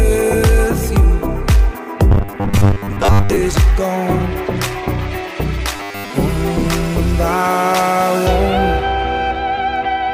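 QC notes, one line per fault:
2.12–3.37 s and 5.76–6.10 s, robotic sound from repeated short buffers: the audio turns into a rigid, metallic buzz pitched at 100 Hz, likely because new audio arrived too seldom and playback kept looping its last 10 ms chunk, skipping most of the real material. On a spectrogram, flat, evenly spaced harmonic lines appear at multiples of 100 Hz. The waveform shows near-identical 10 ms cycles stamped end to end.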